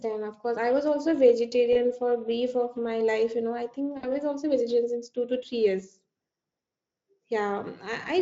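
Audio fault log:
1.73–1.76 s and 3.97–4.10 s, VoIP packet loss concealed by the speech codec: packets went missing, about 20 ms of audio after "course I was also" and about 60 ms after "know I think", which fits one and then three lost frames. The decoder filled the holes by extending its last pitch and filter with shrinking gain, so the sound smears into a fading buzzy tone or coloured noise. Because the decoder's state carries forward, the sound stays thin briefly after "for a brief of" and "also vegetarian since two". The underlying Speex coding adds only light roughness.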